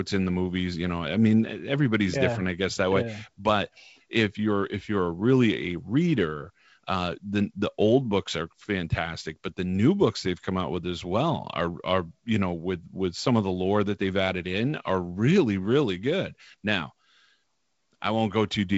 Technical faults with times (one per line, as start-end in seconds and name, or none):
none